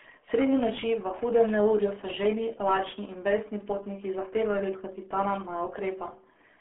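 Throughout, speech runs through a RealAudio 14.4 codec. Heavy coding damage, consistent with 8 kbit/s, removes everything above 3.7 kHz, leaving it muffled and gargly.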